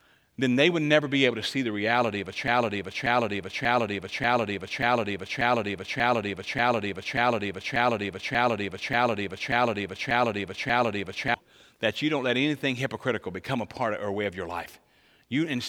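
Speech clip with a broken-record loop from 2.48 to 11.34 s: a 0.59 s fragment repeats 15 times back to back, likely from a stalled player or stream.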